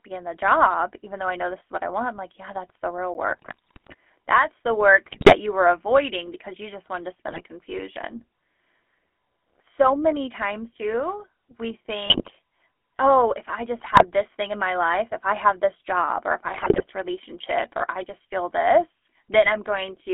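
The whole clip runs through the GSM full-rate codec, and you can plainly hear it: the speech is squeezed into roughly a 300 Hz to 3.4 kHz phone band, with that buzzy, gravelly edge you get from a crude pulse-driven vocal-tract model, which fits the old 13 kbps full-rate coder.

At 3.14 s, right after "that's the real", there's a block of digital silence about 10 ms long. The output dropped straight to zero and came back with no fade, so it lands as a sharp tick rather than an audible gap.

Then the GSM bit errors start, where corrupted bits hit the decoder and scramble its filter, pitch and gain values. They show up at 3.27–3.95 s, 5.06–5.36 s, 7.28–7.42 s (after "you just wanted to"), 12.06–12.31 s, 13.78–14.05 s and 16.44–16.86 s, between "this job or if" and "relationship or I just". Each burst turns the speech into squawks, pops and gargling.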